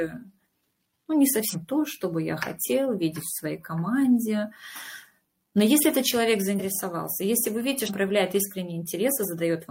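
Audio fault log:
1.49–1.55 s, 6.5–6.6 s, 7.85–7.91 s: compressed frames skipped. The audio jumps ahead by roughly 150 ms, 100 ms and 200 ms as whole frames go undecoded.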